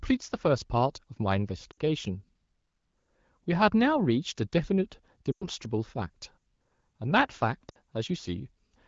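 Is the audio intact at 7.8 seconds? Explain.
No. Lost AMR speech frames hit 7.69 to 7.77 s, about 60 ms. The decoder repeated stale speech settings with falling gain. Speech briefly fades, then returns weak.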